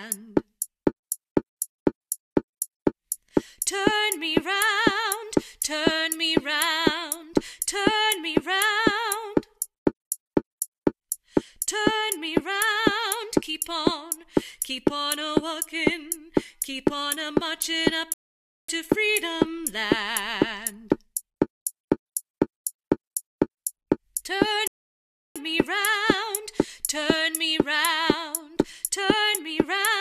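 Rebuffering stalls at 18.14 to 18.69 s and 24.68 to 25.36 s: the audio drops to silence for about 0.55 s and then 0.68 s, then picks up exactly where it halted. The player exhausted its downloaded buffer and waited for more data, so nothing is skipped but time is added.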